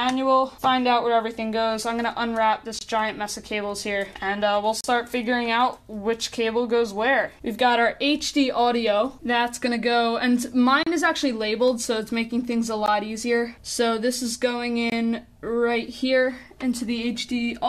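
Gaps between stream segments occur at 2.79, 4.81, 10.83, 12.86 and 14.90 s, spaced on a 2-second segment grid. Mismatched segment time stamps leave holes of about 17 to 34 ms that the player fills with silence, heard as abrupt, hard-edged dropouts, with no audio lost.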